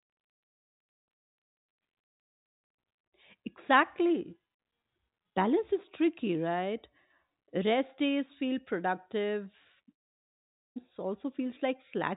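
From 9.92 to 10.79 s, likely a long network dropout: the speech becomes a fading buzz, then near-silence (a flat waveform, a blank spectrogram) until audio resumes.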